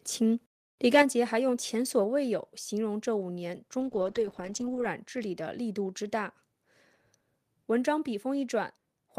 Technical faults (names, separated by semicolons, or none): microphone overload; microphone volume stepped down; call bitrate drop